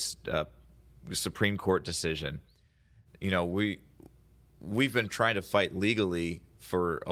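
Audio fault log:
The speech signal has no technical faults anywhere in the clip.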